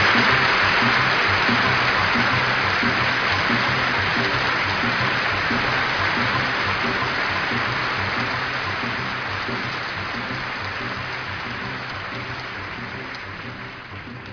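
No faults are audible anywhere in the clip.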